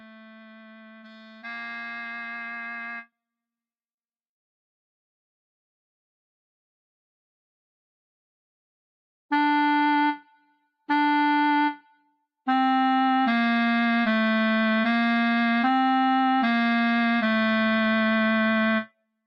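From the very start to 3.1 s, the sound cut by the noise suppressor sinks sharply, by as much as about 19 dB. The suppressor judged this material to be noise and pulled it down, so it fades and thins rather than stopping outright as a gate would.

Across the whole clip, a noise suppressor applied to music or sounds keeps working, with its gain swinging by roughly 20 dB. Sharp onsets pass while sustained parts and decays sag, producing pumping and flutter that follows the sound's own texture, unlike a compressor's level-driven breathing.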